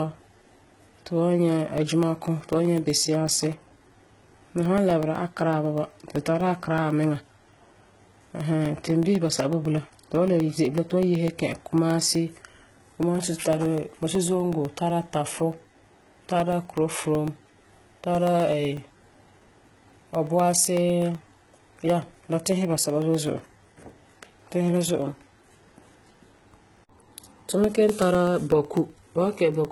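Right from the start the speech carries the marks of heavy codec damage, most likely HE-AAC compression at a low rate, something around 16 kbps. The top end sounds bright but synthetic: the treble above the coded band has been rebuilt from copies of lower bands, so its harmonics don't line up with what sits below, and s sounds come out gritty and metallic. There's nothing at all above about 11.8 kHz.

From 1.78 s through 29.65 s there's a steady tick running under the speech, eight times a second, one every 0.125 s. That's periodic USB or driver dropouts. At each tick something stalls the audio path briefly and roughly a millisecond of sound is replaced by silence. Over the clip that adds up to around two hundred tiny gaps, heard as a regular, evenly spaced clicking that's only audible while there's signal.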